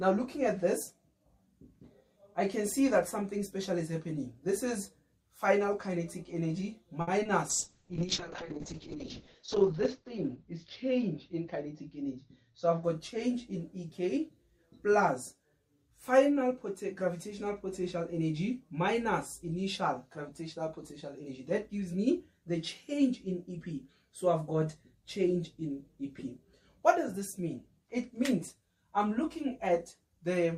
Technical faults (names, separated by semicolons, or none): short stall from a late packet; short concealed packet loss; call bitrate drop; jitter buffer speed-up